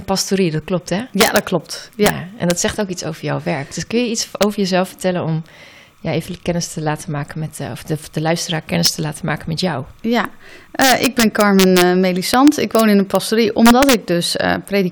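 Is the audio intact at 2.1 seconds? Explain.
No. Integer overflow runs from 2.06 to 2.10 s. Peaks driven about 3 dB past the integer ceiling wrap around to the opposite sign instead of being limited, so each one flips across the full range. The result is a violent crack, far sharper than ordinary clipping. Timecode bleed also sits beneath it, as it does throughout. A square wave switching between tones near 1 and 2 kHz, about 40 dB below the signal and fitting 30-frames-per-second code, leaks in as a steady chirping warble.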